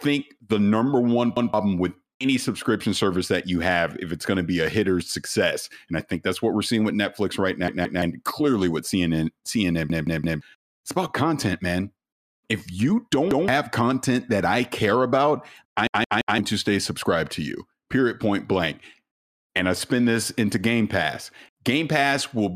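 Repeated buffers occur five times, at 1.37–1.54 s, 7.68–8.02 s, 9.90–10.41 s, 13.31–13.48 s and 15.87–16.38 s. Each time, fresh audio failed to reach the output, so the same 171 ms chunk, which fits an 8192-sample buffer, played again: once at 1.37 and 13.31 s, twice at 7.68 s, and three times at 9.90 and 15.87 s. The speech stutters with hard joins, and up to half a second of the speech is skipped.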